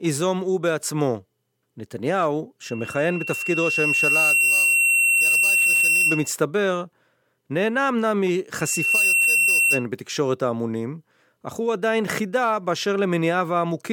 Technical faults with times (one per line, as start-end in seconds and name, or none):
2.62-6.33 loudspeaker feedback squeal
8.59-9.86 loudspeaker feedback squeal